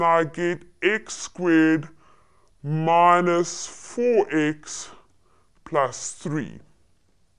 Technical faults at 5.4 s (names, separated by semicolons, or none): wrong sample rate